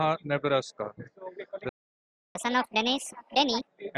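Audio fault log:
1.69 to 2.35 s, playback stall: the speech cuts off mid-flow and the output sits silent for about 0.66 s before picking up again. That gap sounds like the player starved for data or had its audio thread held up for a moment, which is the likely cause here, and nothing reached the output until it got going again. Once it resumes, the audio carries on from where it stopped, with what follows rushed rather than a simple pause and restart.
2.35 to 3.67 s, catch-up at higher speed: right after the stall the speech runs at 1.5 times normal speed, and because it's being resampled rather than time-stretched, the pitch goes up too, by roughly seven semitones, so it has that sped-up, chipmunky lift. The player is chewing through its backlog to win back the time lost in the gap, and once it's caught up, around 3.67 s, speed and pitch settle back to normal.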